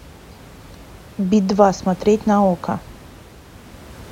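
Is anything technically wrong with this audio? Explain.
No, nothing is technically wrong.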